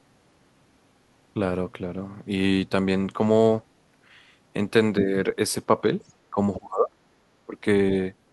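Speech clip with two kinds of echo-control trouble in its second half. The other side's voice leaks through at 4.97–5.02 s, nearly as loud as the talker, and again at 6.01–6.13 s, only faintly, most likely residual loudspeaker echo the echo canceller failed to remove from the microphone signal. The talker's speech is then suppressed in double talk at 6.31–6.37 s with a slight dip, at 6.57–6.97 s with a deep drop lasting about 400 ms, and at 7.46–7.57 s with a moderate dip, likely because the canceller could not separate local speech from echo while both sides talked and attenuated everything.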